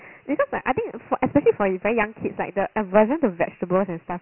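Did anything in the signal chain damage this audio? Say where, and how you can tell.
Yes, at the codec stage. This speech carries Dialogic VOX ADPCM damage throughout. Nothing sounds above 3.1 kHz, which fits a 6,000-sample rate at 4 bits, about 24 kbps. A heavy, gritty hiss tracks the speech. Coarse 4-bit step coding causes it.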